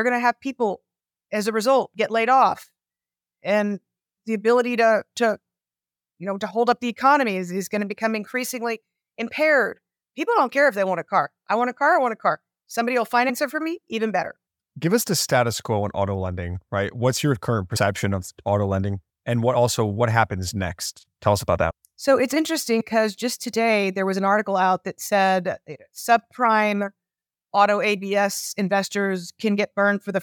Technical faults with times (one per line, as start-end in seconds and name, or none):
13.28 compressed frames skipped
17.75 compressed frames skipped
21.70 compressed frames skipped
22.79 compressed frames skipped